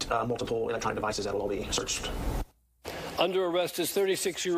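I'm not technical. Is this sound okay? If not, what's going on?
No. A time-stretched section runs from 0 to 1.82 s: software likely sped it up 1.83 times without changing pitch, so it sounds rushed.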